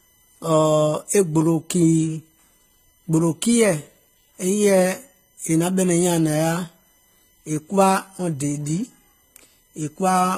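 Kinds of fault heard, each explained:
USB whine: a steady fixed-pitch whine from USB bus current leaking into power or ground, built on a 1 kHz tone and loudest at its 12 kHz multiple, roughly 40 dB below the speech.
Transcoding between lossy codecs: smeared, swirly artefacts stacked on each other, with nothing above 14.9 kHz, likely from MP3 at around 49 kbit/s re-encoded to HE-AAC at 20 kbit/s.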